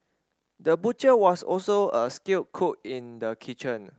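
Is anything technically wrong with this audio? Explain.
Yes, there are two faults in this speech clip.

Clock drift between sender and receiver runs throughout: the sender's clock is about one and a half percent slow, so the jitter buffer keeps draining and the receiver must fill gaps.

Repeated timing corrections from 0.37 to 3.94 s stretch the speech to 99% speed, inserting about 50 ms of repeated material in total, heard, if at all, as faint hiccups or slightly uneven pacing over the Opus call path's 8 kHz bandwidth.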